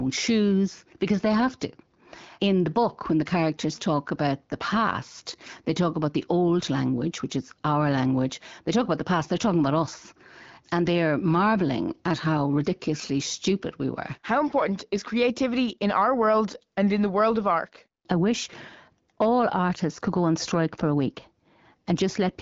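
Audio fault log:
No faults to log for this speech clip.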